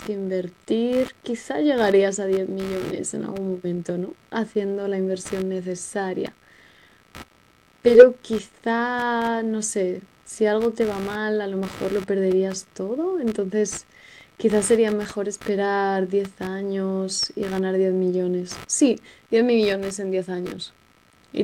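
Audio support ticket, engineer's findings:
Computer activity noise, throughout: buzz pulsing at around 70 Hz, roughly 25 dB under speech. CPU/GPU load shifts the shared ground, coupling into the audio path.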